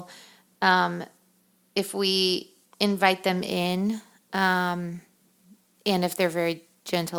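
From 3.49 s to the end, the speech carries sample clock jitter: the converter's timing wanders by around 7 microseconds, so samples land early or late. Steep, loud, bright passages gain a hiss-like roughness roughly 25 dB below the signal, disappearing in pauses.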